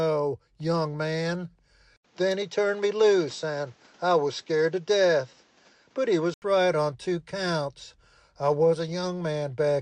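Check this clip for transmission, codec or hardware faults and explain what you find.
One hardware fault. From 1.96 to 6.42 s the sound turns duller after an 80 ms gap, with nothing above 7.9 kHz and faint new background noise. This is likely an input switched to a poorer device.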